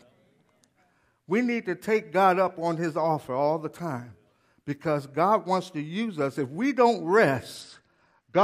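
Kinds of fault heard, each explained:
Bluetooth SBC bit pool drop: The link was congested, so the sender cut its SBC bit pool sharply. From 7.55 s, right after "we don't", to the end, the speech dulls and grows gritty, which fits a fall from bit pool 28 to 9, near 78 kbps.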